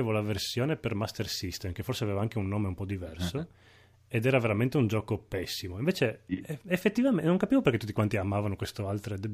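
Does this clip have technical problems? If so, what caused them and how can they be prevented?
No, this clip has no technical problems to prevent.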